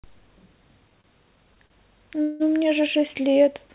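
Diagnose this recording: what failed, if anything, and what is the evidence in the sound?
Repeated stalls (stutter) between 0.9 and 1.72 s, at the network and jitter-buffer stage of the call path. The speech catches five times, each hold short, the longest about 40 ms, adding up to roughly 0.1 s of filled-in sound, about 12 percent of that span. Packets were arriving slower than playout, so the buffer kept draining and the receiver extended the last sound until data resumed. Nothing is lost. The speech simply drags and hiccups.

A call audio freeze from 2.22 to 2.42 s, at the same network and buffer stage. For about 0.18 s the last sound is stretched into a fading buzz or hiss rather than dropping to silence, then the speech picks up exactly where it stopped, so the gap is inserted and nothing is cut. This points to a delay jump of about 0.18 s, likely from packets held up in transit. The band-limited sound with nothing above 4 kHz fits the G.711 mu-law narrowband codec used on this path.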